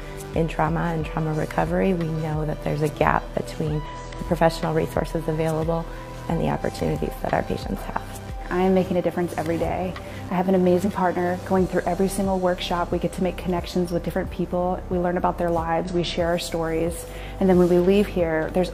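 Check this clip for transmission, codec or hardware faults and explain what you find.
The clip has one kind of fault, occurring three times. Damaged data in a compressed stream appears at 3.86 s, 10.82 to 10.85 s, and 15.84 to 15.90 s. Corrupted bytes make the decoder misread frames, lose sync and hunt for the next header, producing brief chirps or blips.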